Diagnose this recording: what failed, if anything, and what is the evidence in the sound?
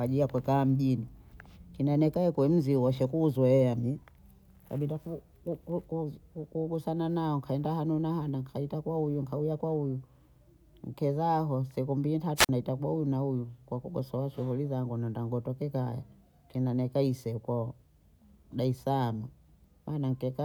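A wireless microphone squelch dropout in the analogue radio link: after "nkezaho siku mbiyi", hiss rises at 12.36 s, then a 43 ms silent hole before "naita bohu huyu na" by 12.49 s. The fading signal triggers receiver muting; unlike a digital packet dropout, hiss precedes the gap.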